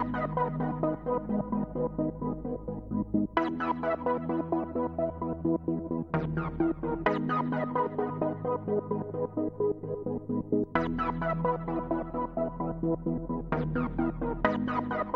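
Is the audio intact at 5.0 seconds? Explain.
Yes, the audio is intact at 5.0 seconds, with no dropout, click, distortion or other fault to be heard at that point.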